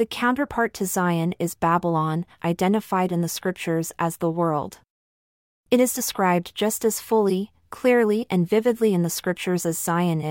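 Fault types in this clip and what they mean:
Corrupt frame decoded: A few bits inside the compressed stream were damaged, but the decoder accepted the frame and played it as if it were valid. Misread gain values and spectral codes then placed energy at frequencies that don't belong in the speech. Here it shows as a brief, faint burst of misplaced energy from 3.07 to 3.12 s, around -40 dBFS. It lasts about 50 ms, which suggests a couple of consecutive frames were affected.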